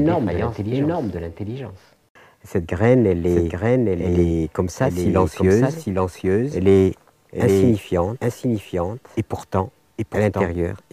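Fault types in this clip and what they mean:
Doubled audio track, throughout: a full-band copy of the whole sound trails the original by around 0.7 s at about 5 dB lower, with no decay or room colour. It is likely a second capture through a slower path or an edit holding two offset copies.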